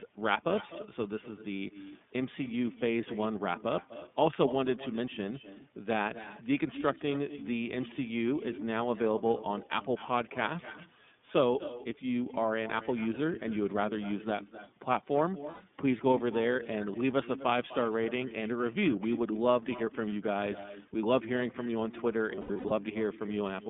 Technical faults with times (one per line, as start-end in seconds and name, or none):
0.00-23.69 echo with no canceller
0.00-23.69 iLBC codec
15.50-15.61 lost iLBC frames
22.35-22.72 lost iLBC frames